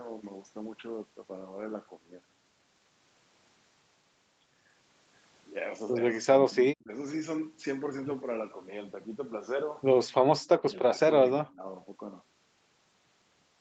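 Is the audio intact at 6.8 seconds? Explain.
No. From 6.75 to 6.89 s the speech ducks by about 30 dB, likely speech suppressed in double talk: the echo canceller mistook overlapping talk for echo and turned it down. Unlike a packet-loss dropout, the level dips without any robotic concealment buzz.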